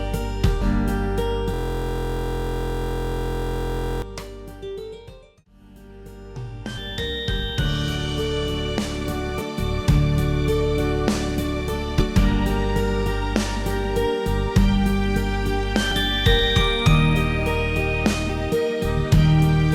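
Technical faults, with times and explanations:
0.61–0.66, 6.77, 9.41, 11.99–12.04, 15.91 and 18.29 s: compressed frames skipped. The sound jumps forward by roughly a tenth to a third of a second, in steps that fit 20 ms frames.
1.54–4.02 s: system hang loop. A 23.22 ms slice of audio repeats exactly, more than a hundred times, which fits a 1024-sample ring buffer cycling while the system stalls. The 43.1 Hz repeat rate gives a steady mechanical buzz. Unlike mains hum, it carries the timbre of the frozen slice.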